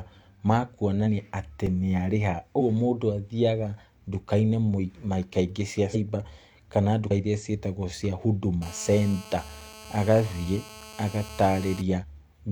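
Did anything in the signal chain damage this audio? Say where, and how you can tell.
Yes. The damage comes from three separate stages.

Compressed frames skipped, at the decoding or storage stage: the sound jumps ahead at 1.03, 2.56, 5.90, 7.06 and 11.99 s. Each jump loses a multiple of a 46.4 ms frame, roughly one, four, three, two and four frames (about 50 to 200 ms). The decoder dropped whole frames. A dropout would leave a hole, but here material is simply missing.

A block of digital silence, from the driver or buffer stage, at 1.66 s: a 2.13 ms run of zeros, with no fade in or out, produces a sharp tick. It differs from the frame skips because the signal cuts hard to nothing and back, without jumping ahead. This points to an output buffer that wasn't filled in time.

GSM phone buzz, picked up in the analogue wiring from 8.62 to 11.82 s: a hard, raspy buzz at 217 Hz sits about 19 dB below the signal and holds steady, as it does during a call. 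Circuitry rectified the phone's transmit bursts. Mains hum sits at 50 or 60 Hz and sounds smoother; this buzz's odd pitch and dense harmonics mark it as radio interference.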